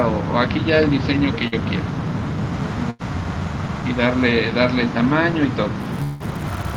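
The audio breaks up twice in short bursts of packet loss. At 1.47 to 1.54 s about 40 ms goes missing behind a brief concealed tail, and at 2.90 to 3.01 s about 100 ms is replaced by a fading continuation of the preceding sound. These differ from a dropout because they are short and resume quickly. From 5.80 s to the end, a filter restarted on every block adds a regular 200 Hz tick-buzz. That rate points to blocks of about 5 ms, each starting from a small transient, and the buzz rises and falls with the signal level rather than sitting at a fixed level like hum. Within that stretch, 6.04 to 6.22 s is bridged by a held, decaying continuation that lasts the whole gap, with no true silence before the audio returns further on, about 160 ms later. Its length sets it apart from the earlier bursts, and it is likely a long network dropout.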